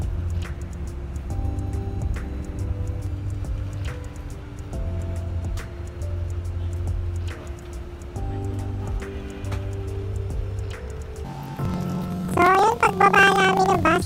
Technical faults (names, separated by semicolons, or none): planar audio read as interleaved